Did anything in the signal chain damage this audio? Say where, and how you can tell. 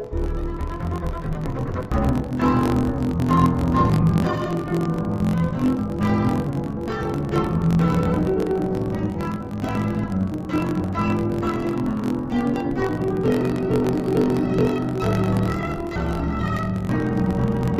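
Yes, at the sample-format conversion stage: interleaved audio read as planar, throughout. The sound is an octave low and buzzes at 45.9 Hz. Each 21.77 ms block's channel halves play together at half speed.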